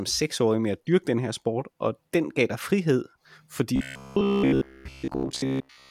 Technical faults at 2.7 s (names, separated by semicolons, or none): none